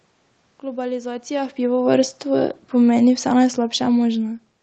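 Automatic gain falling runs from 1.61 s to 4.4 s in this speech recording. The automatic gain control judged the input too loud or its background noise too strong and eased its gain down by about 5 dB, so the speech and the room noise behind it sink together, unlike a talker simply moving away. The call codec leaves nothing above 8 kHz, which is expected for this route.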